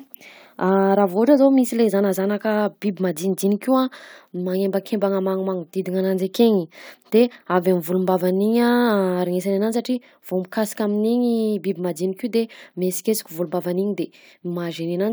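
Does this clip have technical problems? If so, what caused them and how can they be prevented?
No, no technical faults here.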